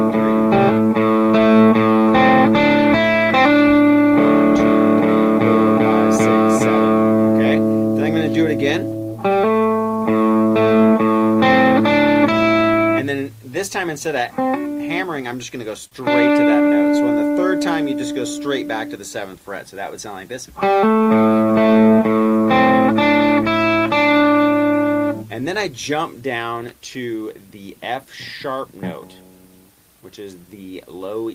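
At 15.87 to 15.94 s, a short stall from a late packet empties the jitter buffer; about 41 ms of sound is stretched, held with a faint buzz or dip, then resumes intact.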